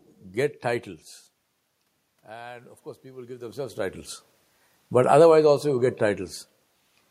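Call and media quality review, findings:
Automatic gain rising, 2.26 to 4.15 s. Input level at the microphone falls by about 17 dB. AGC responds by ramping gain up about 8 dB over roughly 1.9 s, so speech and room noise swell together.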